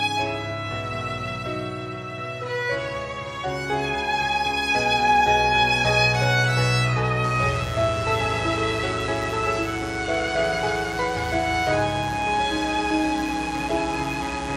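From about 7.24 s right through to the end, a mains buzz comes in: sharp switching spikes from a 60 Hz supply, leaking in via something like a dimmer or poor shielding, stacking harmonics up into the kilohertz range. It's a raspy, steady buzz, roughly 15 dB under the sound.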